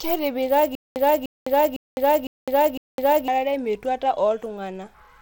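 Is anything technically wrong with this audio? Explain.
Yes, two faults. Throughout, the speech has gritty noise and flickering, unstable treble, plainly audible damage that is likely Bluetooth SBC compression at a low bit pool, around 96 kbps. Unlike MP3 swirl, it sounds coarse and grainy. From 0.75 s to 3.28 s there is a stutter with silent gaps: a 0.30 s burst repeats five times, each followed by 0.21 s of digital silence, every 0.51 s. This is likely a stalled stream replaying its last fragment. Plain dropouts would leave only gaps, with no repeated burst.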